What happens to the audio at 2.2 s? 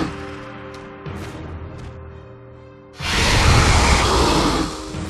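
At 2.17 to 2.24 s the audio lurches forward: a short stretch simply isn't there. This is compressed frames skipped. Whole frames of the encoded stream were either missing or rejected as damaged by the decoder, so playback jumps ahead by about 50 ms.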